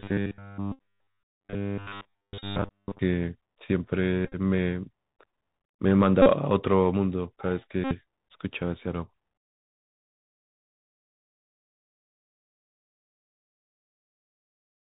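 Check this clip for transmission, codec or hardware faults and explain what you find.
Three problems stand out: narrowband headset coding throughout, a robotic stretch at the start, and several short buzzy dropouts from repeated Bluetooth packets.

Bluetooth CVSD headset codec, the whole clip: one-bit up/down coding at 64 kbps caps everything at 4 kHz, so s sounds go scratchy over a grainy hiss.

Robotic sound from repeated short buffers, 0.01 to 2.99 s: essentially the entire stretch is a rigid metallic buzz at 100 Hz, likely from a 10 ms buffer being replayed while fresh audio gets skipped.

Bluetooth headset packet repeated, at 0.72 to 0.79, 2.39 to 2.44, 4.25 to 4.35, 6.22 to 6.27 and 7.84 to 7.95 s: lost packets get replaced by the last one re-decoded. Each gap spans roughly 34 to 71 ms and produces a brief steady buzz near 267 Hz. The one at 4.25 s is scattered, with its longest run about 30 ms.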